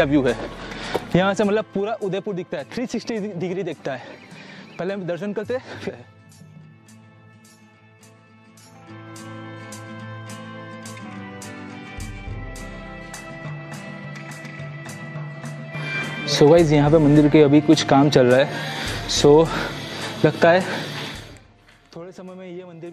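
From 0.88 to 1.93 s the level drops about 10 dB in 2 dB steps, roughly seven per second. This is zipper noise: the gain jumps instead of gliding, so each step leaves a small click and the fade carries a ticking, zipping edge.

At 5.88 s there is damaged data in a compressed stream. Corrupted bytes make the decoder misread a frame and lose sync, then resume at the next frame header. The result is a short glitch.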